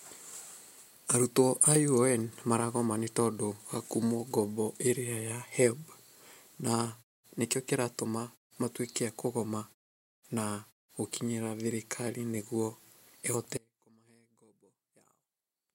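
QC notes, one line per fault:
13.57 s to end, audio dropout to a faint residue: speech cuts off abruptly, leaving faint sound about 30 dB down, likely from a break upstream rather than a gradual pause fade.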